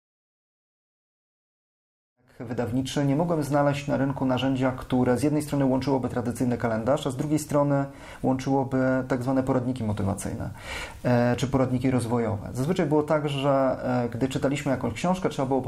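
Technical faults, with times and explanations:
No technical faults can be heard in this recording.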